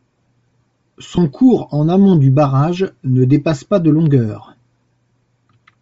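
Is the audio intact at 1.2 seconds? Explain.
No. At 1.2 s the sound carries Bluetooth LC3 compression, the likely cause of a breathy, grainy edge that runs through the whole clip. LC3 codes short blocks of audio as spectra. At a low bitrate, which fits about 32 kbps here, it discards much of the upper band and fills the gaps with noise. The damage is plainly audible. The highs sound hissy and coarse rather than clean.

The moment also follows a dropout from lost LE Audio frames, from 1.15 to 1.18 s. That is about 22.5 ms, which fits three lost 7.5 ms frames. The decoder covered the gap by repeating the last spectrum with scrambled phase. This gives a brief noisy smear in place of the real sound. The dropout has ended by 1.2 s, but it lands just before it.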